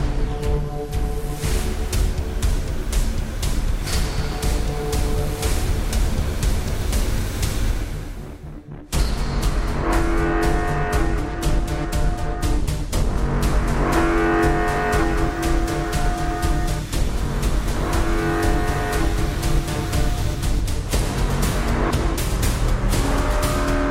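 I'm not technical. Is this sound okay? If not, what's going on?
Yes, this sound is okay, and nothing is going wrong with it.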